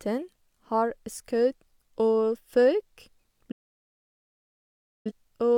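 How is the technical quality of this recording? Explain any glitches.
The recording has one clear problem near the end, a digital broadcast dropout. At about 3.51 s the speech fades out over roughly 8 ms and goes completely silent until about 5.12 s. The receiver either lost the digital stream or kept getting frames that failed their checks, so it muted instead of playing garbage. Roughly 1.5 s of programme is simply gone, which points to a few dozen lost frames. When sound returns, it picks up later in the programme rather than where it left off.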